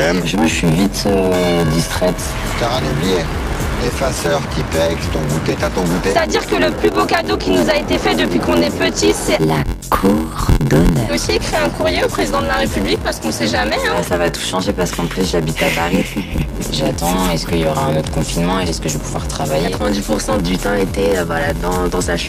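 From start to finish the audio carries a steady buzz at 86.1 Hz, the signature of a block size mismatch (padded). One stage delivers shorter blocks than the next one reads, and the shortfall in each block is filled with silence, so a brief gap recurs at the block rate. The buzz rate fits a 512-sample read buffer. Playback runs at 0.861 times normal speed, though the timbre is preserved.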